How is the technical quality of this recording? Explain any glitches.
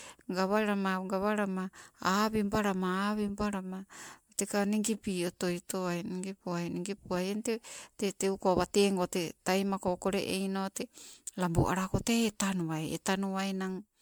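The recording has one clear problem running the whole way through: generation loss. The speech sounds swirly and hollow, with a smeared, watery texture and soft, blurred consonant attacks, and the top end stops at about 19.9 kHz. The likely cause is repeated MP3 encoding, around seven passes at something like 128 kbit/s. Each re-encode quantises again on a shifted frame grid, so the noise and spectral holes pile up into a worse result than one pass at that bitrate would give.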